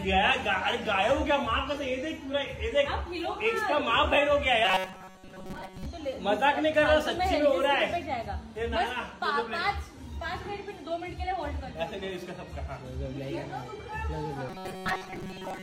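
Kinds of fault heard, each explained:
Robotic sound from repeated short buffers: fresh audio likely reached the playback too rarely, so the software filled each gap by replaying the last few milliseconds while the real signal was skipped. The loop repeats at 188 Hz, which fits a segment of about 5.3 ms, and it covers most of each affected stretch, from 4.65 to 5.86 s and from 14.49 to 15.63 s. The result is a rigid, metallic buzz that follows the original sound only loosely.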